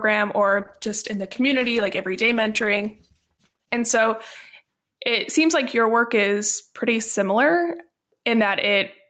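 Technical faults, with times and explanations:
Throughout, gain pumping: the gain swings by roughly 5 dB. A fast limiter is likely pulling down gain that was set too high. Loud and soft parts sit closer together, so the speech sounds squashed.
0.6 to 6.79 s, call bitrate drop: the encoder falls from 40 kbps to 10 kbps and stays at the low rate for about 3.1 s. Opus codes more coarsely there. The speech turns rough and watery, then clears as the bitrate recovers.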